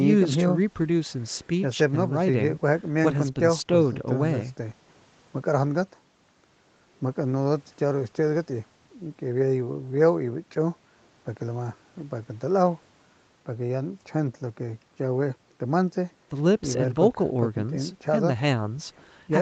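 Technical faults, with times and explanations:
No technical faults were found; the speech was captured through call microphone processing and carried over a WebRTC call path, with nothing heard above about 8 kHz.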